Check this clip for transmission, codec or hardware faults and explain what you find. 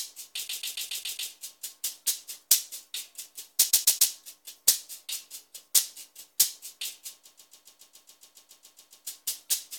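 The clip has a repeated frames fault. From 0.47 to 1.30 s, 3.69 to 4.11 s and 7.25 to 9.06 s, a 139.3 ms block stutters, repeating six, three and thirteen extra times. A run of compressed frames, which fits six frames, was written or sent over and over, so the decoder replays it and each event adds its duration to the clip.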